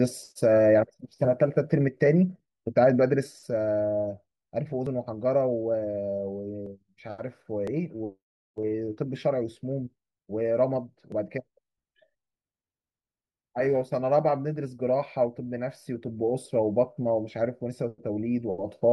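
At 4.87, 6.66, 7.67 and 11.12 s the speech jumps ahead by 10 to 40 milliseconds, likely a dropped buffer (overrun) joining the audio on either side.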